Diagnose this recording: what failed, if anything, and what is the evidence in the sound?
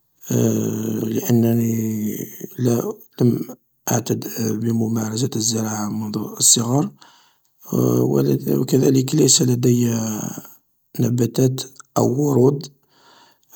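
Nothing failed; no stage shows any fault here.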